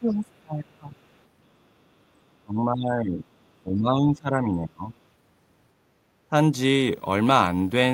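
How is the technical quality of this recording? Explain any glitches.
The recording has some clear problems, mostly in the first five seconds, and they all point to the echo canceller on a call struggling.

Speech suppressed in double talk shows up three times: 0.0 to 0.94 s, 2.44 to 3.23 s and 3.63 to 4.92 s. The talker's speech gets pushed down, by something like 25 dB in that first stretch and around 15 dB in the later two, so the talker sinks and thins out. The likely cause is both ends talking at once. The canceller can't tell the local talker from the loudspeaker echo, so it ducks everything.

The other side's voice leaking through comes in just after, from 0.97 to 1.18 s. A second voice slips into the microphone path very faintly, far below the talker, more a ghostly scrap than anything you'd follow. That's likely loudspeaker playback the echo canceller didn't fully scrub out. It's brief, but it fits right in with the suppression trouble around it.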